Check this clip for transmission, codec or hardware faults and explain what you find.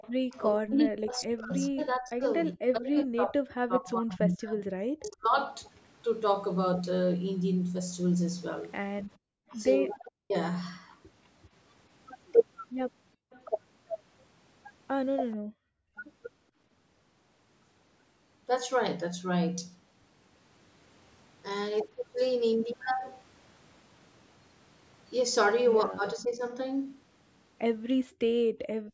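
Three echo-canceller faults run through the speech, clustered around the start and the middle, with shorter events near the end.

Echo leak, 0.0–0.4 s and 9.51–15.36 s: a faint delayed copy of the speech trails it by roughly 424 and 430 ms, around 25 dB down. The likely cause is a loudspeaker on the far side whose echo canceller let part of its microphone pickup return.

Speech suppressed in double talk, 0.0–5.38 s, 9.99–15.98 s and 26.14–26.45 s: the voice dips and cuts out in pieces, by up to around 40 dB across about four seconds at the start. The later two events are brief, and the last is only a shallow dip of around 10 dB. These are likely overlapping talk confusing the canceller, so it turned the talker down along with the echo.

Background gated by the echo canceller, 9.16–9.5 s, 15.36–15.96 s and 28.07–28.93 s: the room sound drops by about 40 dB (about 39 dB in the middle event) while the far-end loudspeaker plays. 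The canceller clamps the microphone hard, and the background returns when it releases.

Nothing is heard above 8 kHz, which is the normal band limit of the call's microphone processing.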